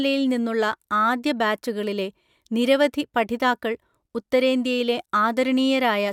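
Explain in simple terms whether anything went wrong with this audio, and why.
Nothing went wrong with this speech recording. There are no dropouts, glitches or other technical problems anywhere in the audio.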